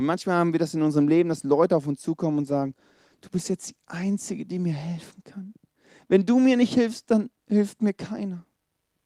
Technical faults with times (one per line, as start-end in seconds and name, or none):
2.43-4.25 call bitrate drop